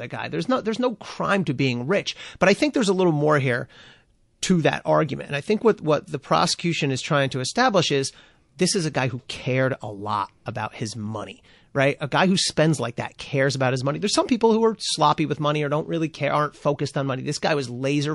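Throughout, likely heavy MP3 compression left the encoder short of bits, fitting about 48 kbps, so the speech loses treble and sounds watery and swirly.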